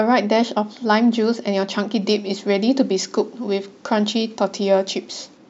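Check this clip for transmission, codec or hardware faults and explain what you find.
One fault: pre-emphasis left on, in the speech from 2.02 s to 5.37 s. The CD 50/15 µs treble lift was never reversed by its matching de-emphasis, so 10 kHz sits about 8 dB above 1 kHz. Sibilants hiss and the sound turns thin and bright. Unlike a high-pass filter, which cuts the bass, this leaves the low end at full weight.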